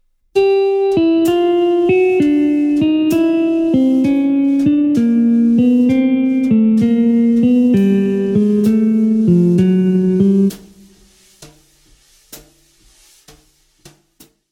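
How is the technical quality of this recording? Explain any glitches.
No technical glitches are audible.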